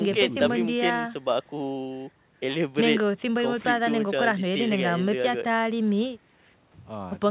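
No technical faults can be heard in this recording.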